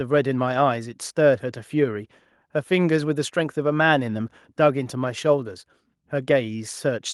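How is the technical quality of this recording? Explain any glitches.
There are no glitches in this recording to explain. The speech runs without any dropouts, clicks, level jumps or timing breaks at any point.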